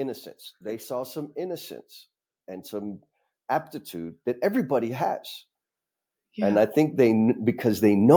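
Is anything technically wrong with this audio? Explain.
Yes. The speech shows automatic gain rising twice: the gain control judged the input too quiet and stepped its amplification up gradually. From 0.61 to 1.73 s the level climbs by about 4 dB, and from 6.35 s through to the end it ramps up again. Because the gain applies to the whole signal, the voice and the background noise swell together, a slow lift in loudness rather than a change in how the talker projects.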